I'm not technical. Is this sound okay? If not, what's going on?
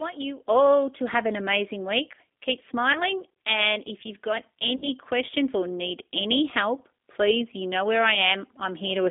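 No. Two separate problems can be heard in this speech.

The G.729 codec is at work the whole way through. This is a phone-call compression system that doesn't send the voice itself. It sends a compact description of how the voice is shaped and pitched, and the listener's end rebuilds the sound from that. The result is thin and boxy, like an old phone line, with only a narrow middle range of sound getting through. The voice also has a slightly rough, artificial edge that is plainly audible.

VoIP packet loss concealed by the speech codec happens twice. The first is at 2.93 to 3.02 seconds, where about 20 ms of sound went missing, which fits one lost packet. The second is at 4.76 to 4.89 seconds, between "if you've got" and "questions or need any", where about 60 ms went missing, which fits three. At each gap the receiving end guessed by stretching the last bit of voice it had, so you hear a short buzzy or smeared patch that fades, and the voice takes a moment to sound right again.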